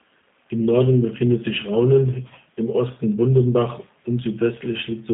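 From start to finish the speech carries G.729 codec damage. Everything sits inside a telephone band of roughly 150 Hz to 3.6 kHz, and the rough, buzzy, synthetic texture points to an 8 kbit/s model-based coder. A plain band-limit alone would sound muffled but clean, without that rebuilt roughness.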